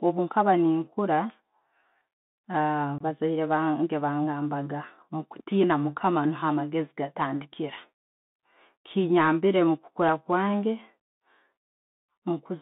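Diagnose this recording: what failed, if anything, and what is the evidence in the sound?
Bluetooth CVSD headset codec at the codec stage: the audio is confined to about 200 Hz to 3.7 kHz throughout, consistent with a 64 kbps CVSD link. Scratchy sibilants and a granular hiss under the speech show the one-bit adaptive step failing to track fast, loud high content, which sets it apart from simple low-pass filtering.

Unconcealed Bluetooth headset packet loss on the wireless link: at 2.98 to 3.02 s there is a hole of about 22 ms with abrupt edges. The length points to roughly three lost packets replaced by silence or an idle pattern rather than smoothed-over concealment.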